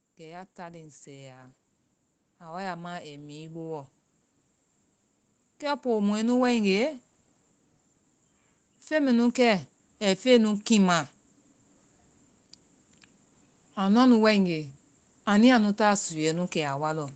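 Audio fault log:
0.17–1.56 s, 2.39–3.92 s, 5.59–6.99 s, 8.88–11.09 s: automatic gain rising. Each time the level controller judges the input too quiet, it slowly raises gain by about 3 to 4 dB, so speech and background noise swell together. The waveform envelope ramps upward, and the spectrogram brightens evenly across all bands, including the noise floor.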